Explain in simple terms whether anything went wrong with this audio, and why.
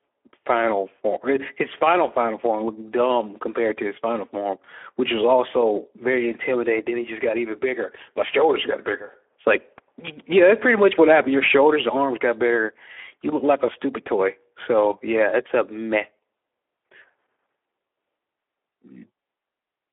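Something went wrong: the speech was squeezed through the Speex codec, an older voice-chat compressor, set low enough that it had too few bits to rebuild the voice faithfully. For the whole clip, the speech sounds noisy and hoarse, with a plainly audible roughness. The sound is also confined to a narrow telephone-style band, roughly 300 Hz to 3.4 kHz, with nothing above about 3.8 kHz, so it comes across thin and muffled.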